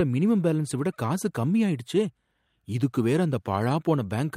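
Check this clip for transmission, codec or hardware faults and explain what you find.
No faults can be heard in this speech recording.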